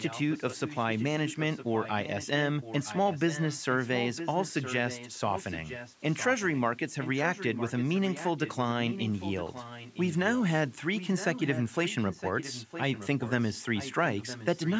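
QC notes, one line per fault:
0.00–2.28, 2.61–6.61, 7.01–8.56, 8.90–10.42, 10.94–14.76 s, echo leak: a copy of the speech returns 0.96 s late, about 10 dB below it and quieter still in the first stretch. This is likely far-end loudspeaker sound that its echo canceller failed to remove.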